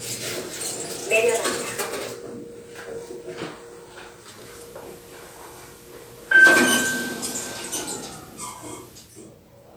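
A recording of everyday sound in which the receiver shows digital radio blending to analogue from 4.19 s to 9.26 s. Over a cross-fade of about 293 ms it drops the digital stream for the FM broadcast, then blends back near the end. During that stretch a hiss floor rises to roughly 25 dB below the signal and the level shifts by about 2 dB. The waveform shows a small step in level at each blend.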